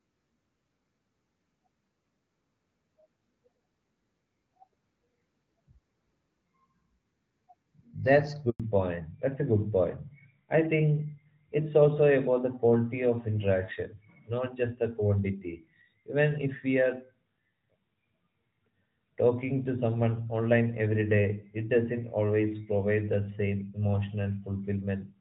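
At 8.50 s the speech cuts out for about 100 ms, until 8.60 s. That's a handover gap: the phone was switching the call from one network to another, and no speech frames arrived during the move. The voice fades within a few tens of milliseconds, there's a short dead silence, and whatever was said during that tenth of a second is simply gone rather than garbled.

Right after the gap, from 8.60 s through to the end, you get a fallback to narrowband. Before the switch the call has that slightly brighter HD Voice quality, with only light coding wear, which fits AMR-WB running at around 12.65 kbit/s. Once the new link comes up, the call has dropped to an older narrowband codec, and the sound points to AMR-NB at around 12.2 kbit/s. Nothing above 4 kHz survives, so the speech loses its crisp sibilants and air and comes across noticeably duller and a bit rougher for the rest of the clip.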